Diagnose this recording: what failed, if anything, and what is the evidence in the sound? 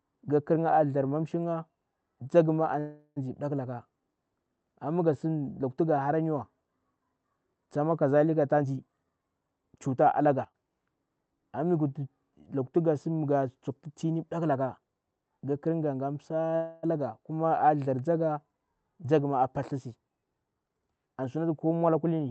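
A call audio freeze at the jitter buffer stage occurs twice: at 2.79–3.18 s, just after "ma a", and at 16.56–16.85 s. Each time the last sound is stretched into a fading buzz or hiss, for about 370 ms and 270 ms, and then the speech resumes exactly where it stopped. The likely cause is packets held up in the network, so the buffer ran dry. Nothing is skipped, which separates this from a packet-loss dropout. Only delay is added.

A jitter buffer speed-up runs from 8.52 to 10.05 s at about 123% speed, removing roughly 0.4 s, and again from 20.48 to 22.20 s, right after "a paltisi", at 116%, removing about 0.3 s. The receiver trimmed pitch-period-sized pieces to drain excess buffered audio, so the speech sounds hurried while its pitch stays put. That unchanged pitch is what distinguishes it from a sample-rate mismatch, where pitch and speed shift together.

A sudden gain jump drops the level by about 12 dB at 10.45 s and holds it down until about 10.55 s. 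Speech and background noise step down together, instantly, rather than gliding as an automatic gain control would. The likely cause is a digital gain setting in the call processing applied without a ramp, an instantaneous sample-to-sample change. The Opus call path itself, with its 8 kHz upper cut-off, is heard throughout.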